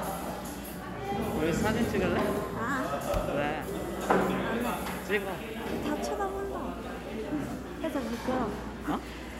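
Nothing in this recording of sounds stood out as a problem on listening.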